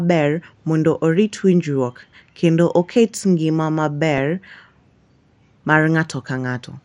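Throughout the speech, the upper sub-bands are starved of bits and switch off, leaving the rest coarsely quantised, likely from MP2 compression at a low rate, with the dullness pointing to around 80 kbps. The result is a muffled, plainly audible gurgling graininess.

At 4.18 s, DAB burbling appears: a few bit errors slipped past error correction into the audio data, corrupting samples in a handful of frames. This puts short blips of noise into single sub-bands.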